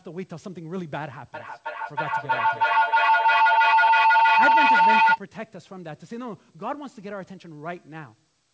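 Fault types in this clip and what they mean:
Feedback howl: from 1.34 to 5.23 s, a microphone-to-loudspeaker loop adds gain on every pass, so the repeats swell instead of dying away and narrow to a tone near 1 kHz that pulses roughly every third of a second, peaking about 14 dB above the speech.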